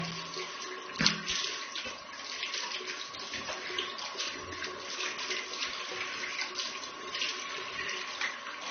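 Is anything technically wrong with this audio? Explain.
Yes. Low-bitrate audio saved at a high bitrate, throughout: the artefacts of the first encoding remain, so the audio is likely a heavily compressed encode re-saved as high-rate MP3, which cannot restore what was lost.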